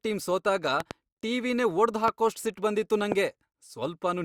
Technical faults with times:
0.80-0.93 loud pop
2.08-2.10 loud pop
3.12-3.14 loud pop

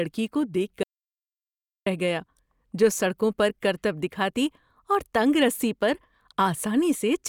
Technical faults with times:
0.83-1.86 audio dropout to silence

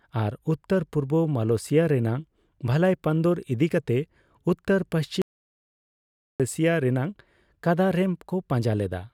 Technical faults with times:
5.22-6.40 audio dropout to silence

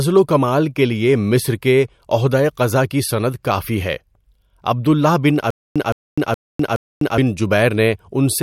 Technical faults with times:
5.50-7.18 stutter with silent gaps

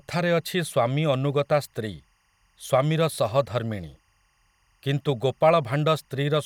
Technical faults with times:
0.00-6.46 timecode bleed

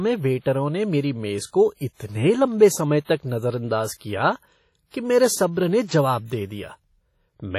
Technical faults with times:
0.00-7.59 WMA compression

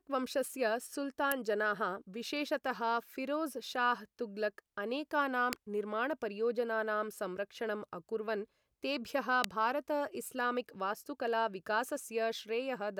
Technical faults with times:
1.32 electrical switching spike
5.53 electrical switching spike
9.44 electrical switching spike

